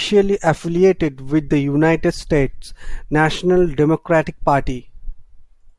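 No technical fault can be heard anywhere in this recording of speech, which carries through without any break, distortion or other disruption to the signal.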